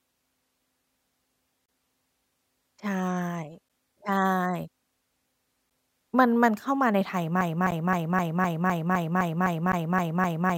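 It's a speech clip, and the first thing you'll catch is a gap at a join of encoded pieces recurring every 2 seconds: a dropout from 1.66 to 1.69 s (about 28 ms), then shorter 11 ms holes at 3.69, 5.70, 7.71 and 9.72 s. Each has a smeared edge, and the speech carries straight on afterward. That regular spacing fits 2-second chunks encoded separately and stitched back together without trimming the encoder's leading delay and last-frame padding, so each seam leaves a sliver of silence. From 7.41 s to the end there's also a broken-record loop: a 255 ms fragment repeats back to back about 12 times, and whatever speech should have followed is simply gone. The likely cause is a player, encoder or stream that stalled and kept resending the last piece it had buffered. The two later seam gaps still land inside that looping stretch.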